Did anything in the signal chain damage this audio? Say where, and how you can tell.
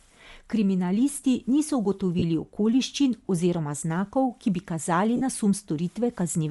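Yes. The damage sits at the codec stage and runs through the whole speech clip. The upper spectrum sounds thinned and then filled back with noise, which gives the voice a breathy, grainy texture. The codec damage is plainly audible. That is the signature of Bluetooth LC3 compression, the likely cause. The transform codec drops upper bands it cannot afford and substitutes noise. The grain suggests a rate around 48 kbps with 7.5 ms frames.

The second fault is at the network stage: lost LE Audio frames. There are two short dropouts. The first runs from 2.19 to 2.23 s and lasts 30 ms, which fits four 7.5 ms frames. The second runs from 5.16 to 5.21 s and lasts 45 ms, which fits six frames. The decoder concealed the missing frames by reusing the last spectrum with randomised signs.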